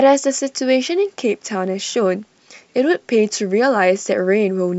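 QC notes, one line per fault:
No faults found on this speech recording.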